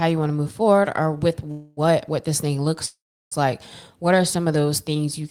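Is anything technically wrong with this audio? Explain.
Yes, two call audio freezes, likely from delayed packets emptying the jitter buffer. At 1.51–1.80 s and 2.86–3.34 s the last sound stretches into a fading buzz, then fully silent for the second. Speech resumes exactly where it stopped, so nothing is lost, unlike a dropout.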